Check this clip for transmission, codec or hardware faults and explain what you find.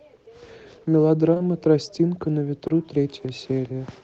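There are three short concealed packet losses, close enough to count as two audible dropouts. Everything arrived over an Opus call path whose audio stops at about 8 kHz.

From 1.33 to 1.41 s there are two back-to-back concealed losses, and another at 2.67 to 2.71 s. Each gap is about 20 ms, which fits 20 ms packets arriving too late for the decoder. The receiver extrapolated the preceding sound across each hole and then crossfaded back into real audio. The result is a brief smear or wobble, longer at 1.33 s, where two losses join, than the single one at 2.67 s.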